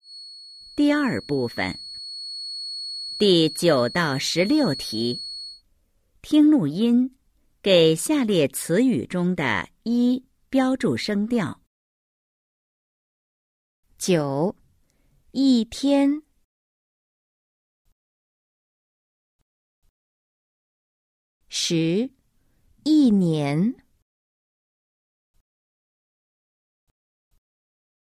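From the start to 5.63 s, a feedback whistle sits at 4.4 kHz. It is thin, swelling and fading slowly, well below the sound. A loudspeaker-to-microphone loop hovering at feedback is the likely cause.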